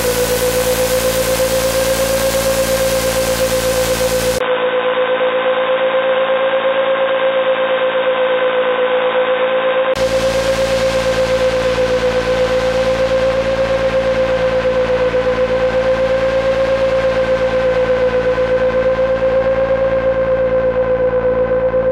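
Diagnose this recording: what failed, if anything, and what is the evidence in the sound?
Driver stage: likely an input switched to a poorer device. From 4.38 to 9.96 s, after a 20 ms gap, the sound dulls and the band narrows.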